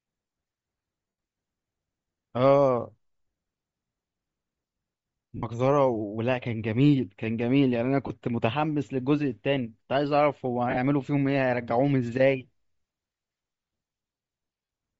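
Throughout this speech, the upper frequencies have a breathy, grainy sheen, as though noise had replaced real detail. That plainly audible damage is likely Bluetooth LC3 compression at a low bitrate, where the encoder zeroes much of the high band and fills it with noise, which fits roughly 32 kbps and 7.5 ms frames. At 1.08–1.18 s, 5.37–5.43 s, 8.07–8.11 s, 10.69–10.78 s and 14.64–14.69 s, the sound briefly smears into a noisy blur. These are lost LE Audio frames, covering about 98, 60, 30, 53 and 45 ms. The decoder fills each gap by repeating the last spectrum with scrambled phases. Around 10.7 s the losses come in scattered short runs of up to about 20 ms rather than one block.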